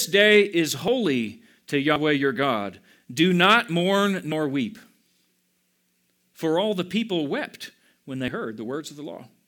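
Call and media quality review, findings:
Forward jumps in the speech at 0.88 s, 1.96 s, 4.32 s and 8.28 s. No gap or silence; the audio lurches ahead at each point. Roughly 40 ms missing at each of the other events, about 70 ms at 1.96 s. Likely a dropped buffer (overrun) in the capture path: samples not read before the hardware overwrote them, so the segment is lost and the surrounding audio is butted together.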